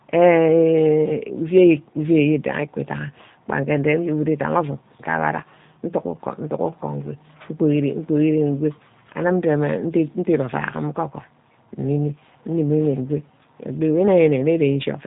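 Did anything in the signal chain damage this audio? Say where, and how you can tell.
Yes: G.729 codec damage runs throughout the speech, at the codec stage. Nothing reaches past 3.8 kHz, and the voice sounds plainly rough and synthetic, consistent with an 8 kbit/s G.729A codec rebuilding each 10 ms frame from a vocal tract filter, pitch predictor and a few pulses.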